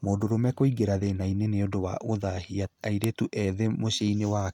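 File header played as audio appears at 3.04 s in this speech clip, as a single sharp, loud click that cuts across the talking regardless of what the voice is doing at that moment. The snap comes from two pieces of audio being joined without stripping the second one's WAV header, so a few dozen bytes of file metadata are read as sample values and played as a brief burst of noise at the seam.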